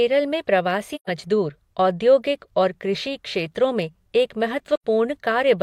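Speech with AAC frame loss with muting at 0.95–1.10 s (128 ms) and after "कृषि क्षेत्रों में एक" at 4.75–4.84 s: soft-faded silent holes, not the hard clicking gaps of sample-level dropouts.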